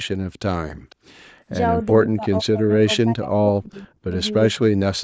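At 0.90 to 0.95 s a faint, delayed copy of the speech surfaces, trailing the original by about 0.5 s and sitting roughly 30 dB below it. This is echo leak, likely a far-end loudspeaker echo that its echo canceller failed to fully remove and sent back.

From 2.06 to 4.14 s the speech repeatedly dips out, falling by up to around 40 dB across roughly one and a half seconds of that span, and a shorter dropout of similar depth follows at 4.58 to 4.80 s. This is speech suppressed in double talk, likely an echo canceller unable to separate local speech from loudspeaker echo while both sides spoke, so it attenuated everything.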